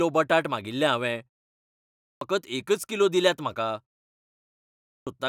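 Clipped start after a pause, at 1.69 s and again at 4.48 s: after silences of about 0.48 s and 0.7 s, the output path has gone idle and must wake before sound passes, so roughly 0.52 s and 0.59 s of speech vanish and each phrase bursts in abruptly, missing its opening sounds.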